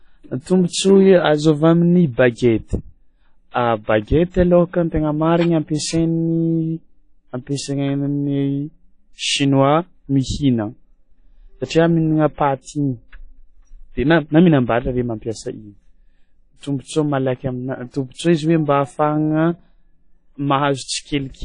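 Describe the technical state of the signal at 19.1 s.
WMA compression is audible at 19.1 s, as it is across the whole clip. The speech sounds ringing and washy, with a hiss that swells and fades with the signal and nothing above about 10.1 kHz. This is likely a transform codec at a low bitrate, around 32 kbps, whose long blocks smear quantisation noise over tens of milliseconds and drop weak high lines.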